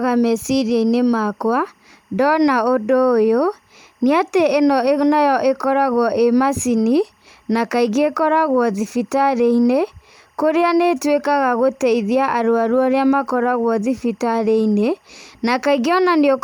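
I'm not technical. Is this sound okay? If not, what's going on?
No. There is timecode bleed: a timing signal, recorded on a neighbouring track or running through a nearby cable, leaked into the speech recording. That signal is a rapid on-off buzz that flips between two high pitches, around 1 kHz and 2 kHz, and its rhythm fits film-rate timecode at 23.976 frames per second. You hear it as a faint, steady chirping warble sitting behind the speech for the whole clip.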